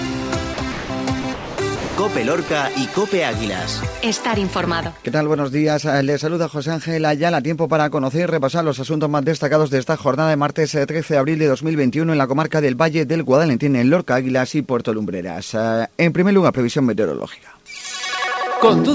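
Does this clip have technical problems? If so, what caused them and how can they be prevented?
Yes, sound dropped by the voice detector, likely from aggressive voice detection at the sender, at 0.54–0.58, 0.72–0.90, 1.22–1.24, 1.34–1.58, 1.76–1.98, 2.48–2.50 and 2.94–2.96 s. Each gap fills with smooth, steady comfort noise rather than the clicks or repeated fragments of packet loss. Lowering the detector's sensitivity or disabling discontinuous transmission prevents it.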